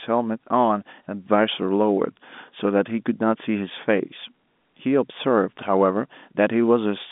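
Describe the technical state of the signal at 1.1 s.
At 1.1 s the audio is intact, with the speech carried in the narrow telephone band of G.711 coding and no fault present at that moment.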